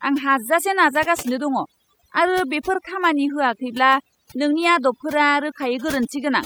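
Speech with overdone noise removal throughout: twinkling specks in near-silent pauses, unlike gating, which mutes pauses whole rather than band by band.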